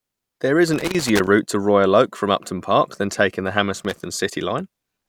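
Loose connector crackle appears from 0.74 to 1.27 s and again from 3.79 to 4.06 s, the second burst arriving just after "than taking the". A worn or dirty contact somewhere in the speech chain is making and breaking as it shifts, so the signal is repeatedly chopped on and off. Both stretches come through as irregular, scratchy crackle riding over the speech rather than a steady noise.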